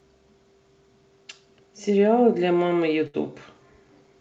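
At 3.07 s a burst of packet loss hits the call stream: a short run of audio never reached the player in time, so for about 63 ms the receiver keeps extending the last bit of speech it had, fading it down, until the stream returns at 3.16 s. The gap is heard as a brief smeared, dying tail, then an abrupt resumption with roughly 60 ms of the speech simply absent. The call codec's 8 kHz band limit stays audible around it.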